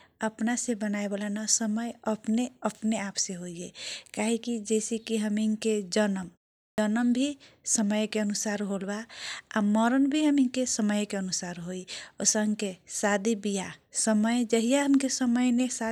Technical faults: clipped start after a pause

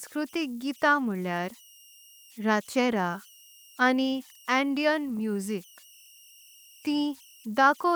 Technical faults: converter idle tones

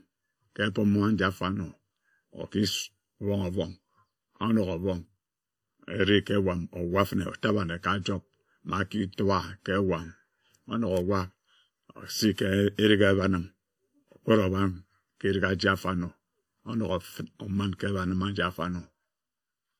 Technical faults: channel delay (comb filtering); low-bitrate audio saved at a high bitrate

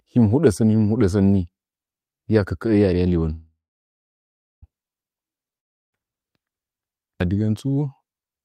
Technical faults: call audio freeze; long network dropout

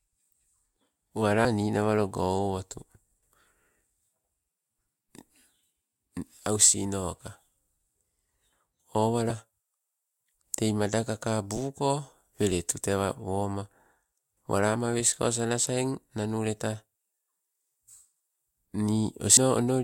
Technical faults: compressed frames skipped

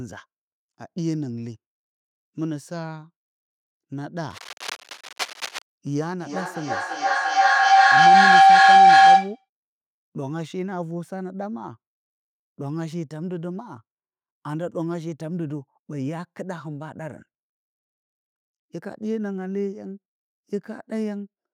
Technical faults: feedback howl

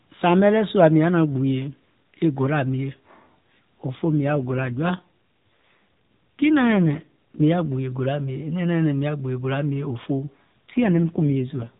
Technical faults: AMR rate drop

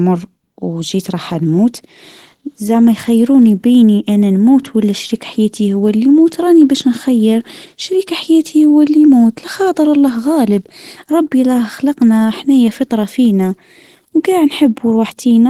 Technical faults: Opus compression

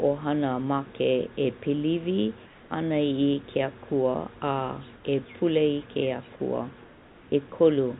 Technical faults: comfort noise in place of the background; sound dropped by the voice detector

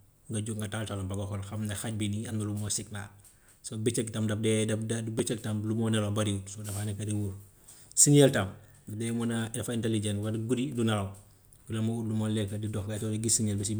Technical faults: block of digital silence

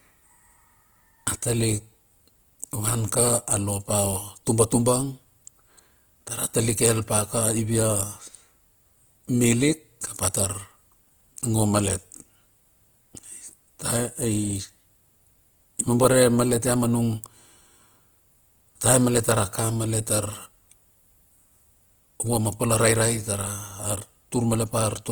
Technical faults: Opus compression

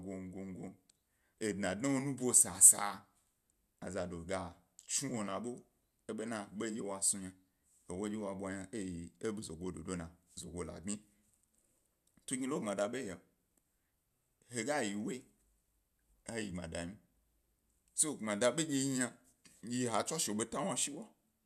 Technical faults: none

